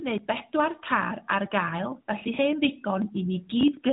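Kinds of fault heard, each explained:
No kinds of fault are heard in this speech clip.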